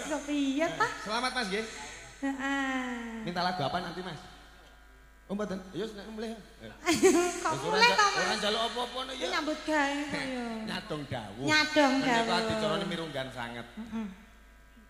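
Nothing stood out as a technical fault on listening to the clip.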